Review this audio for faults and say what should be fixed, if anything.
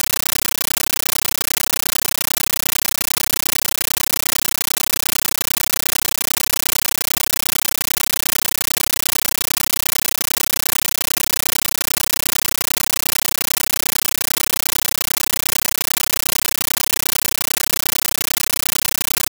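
Compressed stream played as audio throughout: the speech is replaced by loud chattering static, 13.3 ms bursts repeating 31.25 times a second, which fits an undecoded 640 kbps AC-3 bitstream. Set the source to output PCM or route the stream through a Dolby Digital decoder.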